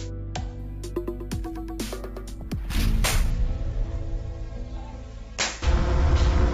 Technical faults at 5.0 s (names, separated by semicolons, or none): none